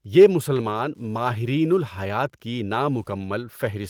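A faint, steady ticking runs under the whole of this speech recording, about ten clicks a second and well below the level of the talking. It is Wi-Fi interference. A nearby Wi-Fi radio is sending its beacon every 102.4 ms, and the audio circuit rectifies each transmission into an audible tick. From 0.53 to 0.79 s the speech turns rougher and noisier for a moment, though it never drops out. This is a lost packet rebuilt from error correction, here a run of roughly 140 ms that points to several lost packets. Each missing packet was replaced by the low-bitrate copy carried in the packet after it, which fills the gap with coarser audio.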